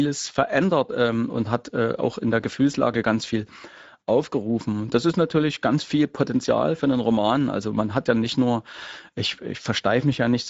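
From start to finish the speech has a rough, hoarse grain, with plainly audible noise woven into it, and nothing reaches above about 7.7 kHz. This is Speex codec damage. Speex rebuilds speech from a predictive model plus a coded excitation signal, and at this setting too few bits go to that excitation, so the voice comes back coarse and noisy. The sound points to a middling bitrate of around 17 kbps.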